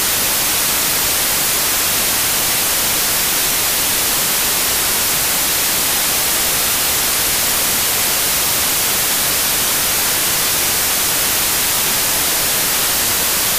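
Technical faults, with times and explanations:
Throughout: samples built from the wrong bytes. Loud white noise on loud sounds; bytes are misassembled, so fast-changing low bits dominate each value.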